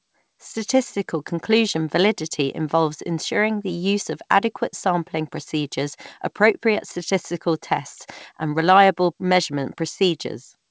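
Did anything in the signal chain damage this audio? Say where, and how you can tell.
No, nothing along the chain damaged this speech. It has passed through a call path, and the complete absence of content above 8 kHz fits a wideband call codec such as G.722 working as intended.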